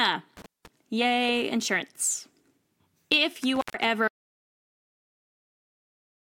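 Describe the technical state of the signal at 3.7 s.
At 3.7 s the speech is inside an intermittent contact fault running from 3.55 to 3.75 s. A loose connection opens for about 132 ms, so the signal drops to near silence with crackle at its edges. The waveform collapses between sharp spikes, and the spectrogram shows a gap bounded by broadband vertical streaks.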